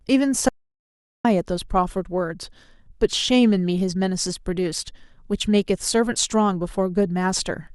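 At 0.49 s the speech cuts out dead and stays gone until 1.25 s, an audio dropout to silence of about 760 ms. There's no room tone at all in the gap, just silence, likely from the input dropping while the recorder kept writing.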